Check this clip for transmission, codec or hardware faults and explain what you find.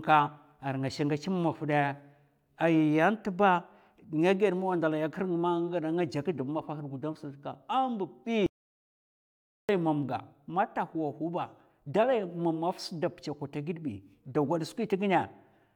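One fault: an audio dropout to silence from 8.46 to 9.69 s. The input was likely lost briefly, through a disconnected device, failed link or accidental mute, while recording continued writing silence. The speech cuts off abruptly into about 1.2 s of total silence, no room tone, then resumes mid-flow.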